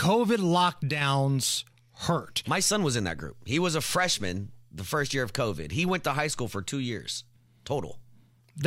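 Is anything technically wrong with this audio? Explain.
Yes. At 0.89 s a sudden gain jump occurs, likely a gain step applied without a ramp, dropping speech and background together by about 5 dB until 1.01 s.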